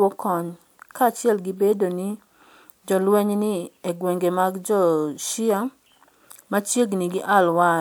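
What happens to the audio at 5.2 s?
Nothing goes wrong at 5.2 s; the speech carries on intact through that moment, with no dropout, glitch or distortion to be heard.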